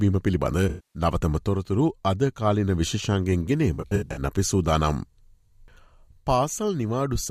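AAC frame loss with concealment strikes at 0.69 to 1.02 s. About 256 ms of audio is lost. The decoder rebuilds it from the last good spectrum, giving a smeared, noisy patch. At 3.74 to 4.22 s, shorter gaps of up to about 70 ms sound phasey and broken.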